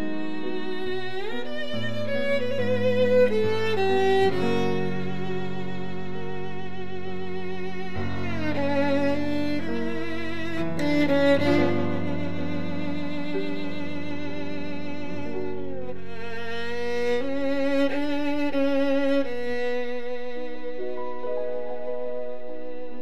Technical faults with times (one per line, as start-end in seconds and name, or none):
0.00-23.02 DC offset